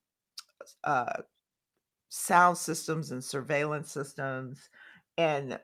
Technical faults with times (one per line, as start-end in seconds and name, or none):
none